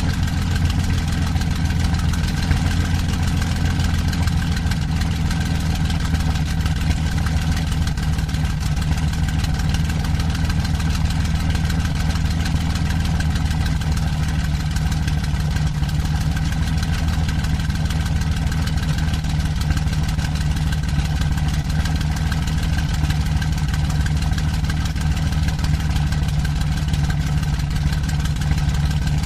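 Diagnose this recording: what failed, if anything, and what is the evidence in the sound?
A regular click recurs every 0.64 s from 0.16 s to 28.85 s, about fifty in all. This points to the driver or buffer stage, most likely clock drift buffer slips: two unsynchronised clocks, a few hundred ppm apart, force a handful of samples to be dropped or repeated each cycle.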